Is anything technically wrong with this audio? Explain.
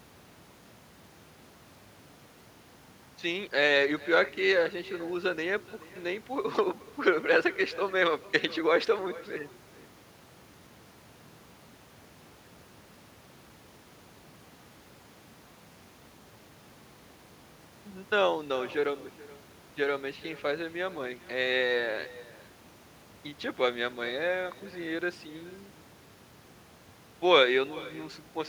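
Yes. Throughout the speech, there is echo with no canceller: the far end plays the call over a loudspeaker, its microphone recaptures it, and nothing strips it out. Every phrase returns roughly 400 ms later, about 21 dB quieter, as a thin shadow.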